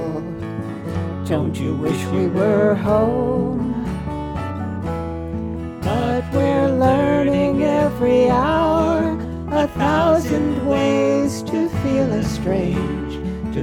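No dropouts, clicks, distortion or level jumps turn up anywhere in the audio.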